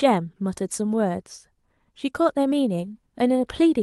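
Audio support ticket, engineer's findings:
No faults found in the speech; call path sounds as expected for the Opus codec and jitter buffer, with the top end stopping around 12 kHz, which fits the codec's configured bandwidth.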